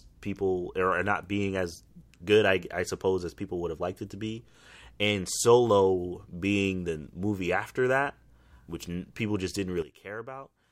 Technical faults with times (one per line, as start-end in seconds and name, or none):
9.82-10.71 sudden gain jump